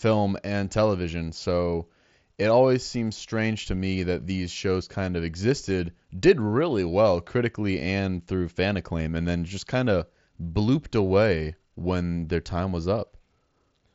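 No technical faults occur at any point in the speech, which comes through a Bluetooth mSBC headset link working as intended.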